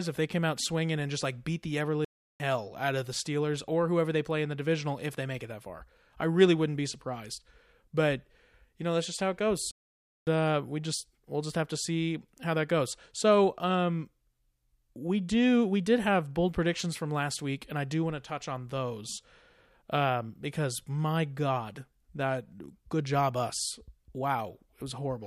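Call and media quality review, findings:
Playback stall: output cuts to silence 2.05–2.40 s (0.35 s), "like beat the ever" to "out of the", and 9.71–10.27 s (0.56 s), "that's just how it" to "uh we just we'll". Flat waveform gaps, blank full-band spectrogram columns. Likely buffer underrun or blocked player thread.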